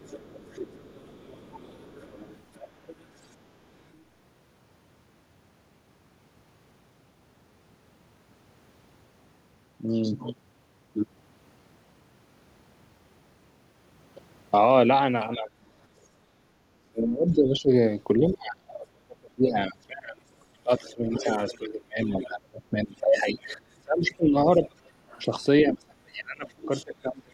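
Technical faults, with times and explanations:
0.0–3.95 s, other side's voice leaking through: a faint second voice sits roughly 25 dB under the talker, likely loudspeaker echo the canceller missed, and shows as weak, separate harmonic striations on a spectrogram.
15.36–15.5 s, speech suppressed in double talk: the voice briefly dips by around 10 dB, likely the echo canceller ducking everything while both sides overlap, leaving a short notch in the waveform envelope.
16.33–27.33 s, speech suppressed in double talk: the voice is repeatedly pulled down or cut, at worst by roughly 30 dB and for about 7 s in total. This is likely the same ducking, and it appears as gaps and collapsed stretches in the waveform.
18.28–18.32, 20.71–22.28, 23.19–25.23 and 26.6–27.23 s, other side's voice leaking through: scraps of the far voice come through about 15 to 25 dB down, likely residual echo, seen as faint extra harmonic traces overlapping the talker's.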